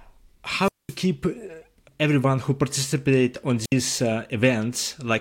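Speech with two wireless microphone squelch dropouts, at 0.57–0.98 s (about 210 ms muted) and 3.63–3.73 s after "everyone who participate on" (65 ms). The fading radio link lets hiss rise as broadband spectrogram noise, then the receiver mutes, leaving flat-line gaps in the waveform.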